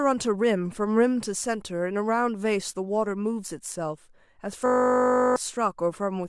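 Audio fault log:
4.66–5.36 s, system hang loop: the speech stops and a single 20 ms slice of audio repeats back to back, around 35 times, so you hear a flat, steady buzz at 50 Hz instead of speech. That happens when the machine or driver stalls while the sound hardware keeps replaying whatever is sitting in its ring buffer, here a 20 ms buffer. Because the buffer is so short, the repeats blur into a tone rather than a stutter, and roughly 0.7 s of real audio is gone.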